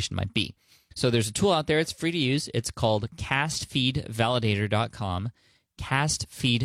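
No technical faults can be heard in this recording.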